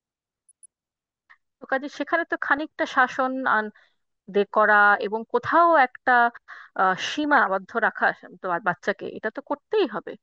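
From the start, the speech sounds dull and plainly gurgly, with a grainy edge on every phrase. That's the sound of MP2 compression, likely at a low rate near 80 kbps, where the upper sub-bands drop out and the remaining bands are coarsely quantised.

On top of that there's DAB burbling at 0.49–0.66 s, 2.48–2.58 s and 7.24–7.47 s. Each is a short patch of burbling where bit errors slipped past the error correction and put short blips of noise into individual sub-bands.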